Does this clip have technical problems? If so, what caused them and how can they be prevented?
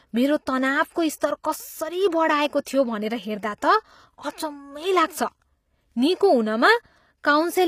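Yes, two. Right through the speech there's plainly audible HE-AAC compression, likely from a low-bitrate encode, which fits something around 24 kbps. The codec only really carries the lower spectrum and fakes the treble by copying lower bands upward, so the top end sounds synthetic. Sibilants come out gritty or lispy, and there's nothing at all above 15.5 kHz. To prevent it, encode at a higher bitrate or use plain AAC or a lossless format for the master.

There's also a short pre-echo at 2.65 s. A sharp attack landed late in a transform block, and the codec spread its quantisation noise across the whole block. That puts a short hiss, about 16 ms long, just ahead of the onset, and the attack itself sounds softened and smeared. Giving the encoder more bitrate or a codec with better block switching on transients should keep that noise from leaking ahead of the attack.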